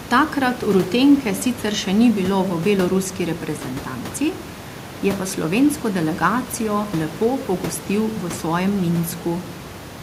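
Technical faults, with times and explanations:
No technical faults, with times and explanations, to report: the background room noise, about 16 dB below the speech, belongs to the recording.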